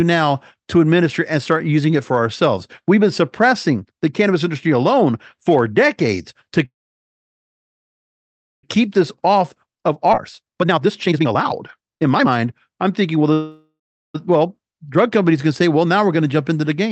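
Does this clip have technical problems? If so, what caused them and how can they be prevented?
Yes. Call audio freezes at 6.65–8.65 s, after "alone for decades to", and at 13.33–14.16 s, before "well drug companies can". Each likely comes from packets delayed long enough to empty the jitter buffer. Short fading hiss then near-silence adds about 2.0 s and 0.8 s of gaps. A waveform shows flat stretches, and a spectrogram shows blank columns. A larger or more adaptive jitter buffer on a steadier network would prevent this.

Jitter buffer speed-up at 8.87–13.32 s plays audio about 34% fast at unchanged pitch, trimming roughly one and a half seconds. On a spectrogram, harmonics stay level while syllables compress. Slower, gentler delay reduction would prevent it.

Skip ahead at 10.12–10.15 s drops roughly 0.4 s, splicing both sides almost directly. The waveform shows an abrupt seam with almost no gap. 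Sizing the buffer to avoid overflow would prevent it.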